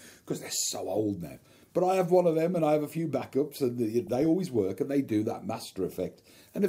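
DAB burbling, from 4.07 to 4.26 s and again from 5.92 to 6.34 s. Weak reception lets bit errors, roughly a few per thousand, slip past error correction into the MP2 data. The corrupted samples put short blips of noise into individual sub-bands, and corrupted scale factors make sub-bands jump in level for up to a frame.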